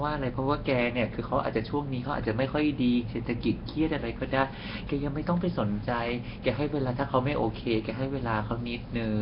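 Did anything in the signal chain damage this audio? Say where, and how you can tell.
Yes. Nellymoser compression runs through the whole clip, damage at the codec stage. The speech has a rough, hissy halo and a smeared, underwater quality, and nothing reaches above 5.3 kHz. That points to heavy coding, likely Flash's Nellymoser Asao, which fits a bitrate around 22 kbps. Each short block gets a fixed, tiny bit budget, so weaker bands are dropped and refilled with noise, which produces the hiss and the smear.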